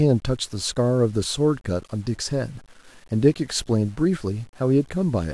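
Grainy, gritty distortion follows the speech throughout, roughly 35 dB below it, likely low bit depth without dither, which fits 8-bit truncation.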